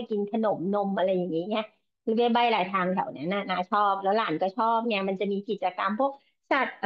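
A speech recording with nothing technically wrong with it, so there are no times or causes to report.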